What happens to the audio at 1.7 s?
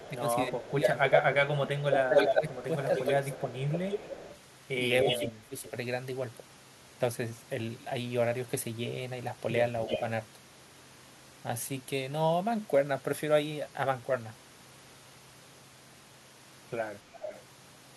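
At 1.7 s the speech is being pulled down by speech suppressed in double talk, running from 0.08 to 3.25 s. The level dips by up to about 10 dB, in pieces totalling around two seconds. This is likely an echo canceller turning both voices down while both sides talk.

Just after, at 1.77 s, an echo leak begins and lasts to 4.39 s. A copy of the speech returns about 297 ms late, about 5 dB quieter than the original. A likely cause is loudspeaker echo the canceller failed to remove.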